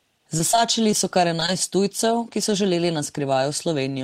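From 0.38 to 0.93 s, just before "so kar", scattered short gaps appear: about four lost packets, the longest around 15 ms, totalling roughly 40 ms, each patched by extending the preceding sound. They are heard as brief ticks and smears. A spectrogram shows thin vertical seams where harmonics briefly freeze.

Right after "so kar", short concealed packet loss strikes three times, at 1.36–1.39 s, 1.40–1.42 s and 1.46–1.49 s, each missing 10 ms and filled by continuation lasting 13 to 18 ms. The onset of "tujcev ki so želeli" wobbles.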